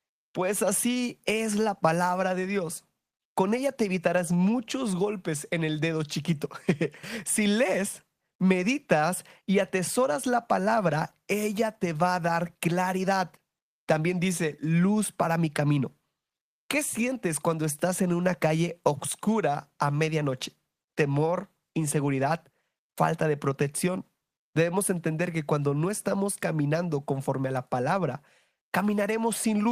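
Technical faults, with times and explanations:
No technical faults are heard in this speech clip.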